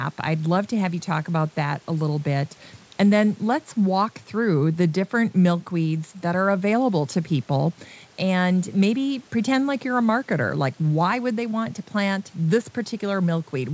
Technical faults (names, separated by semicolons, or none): none